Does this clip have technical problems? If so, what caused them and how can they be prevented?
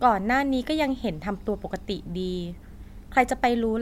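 No, the speech signal shows no technical problems that need a cause or a preventive fix.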